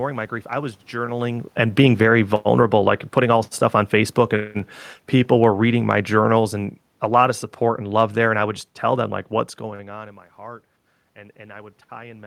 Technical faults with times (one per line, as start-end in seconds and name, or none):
1.45-4.11 automatic gain falling
5.13-9.13 automatic gain falling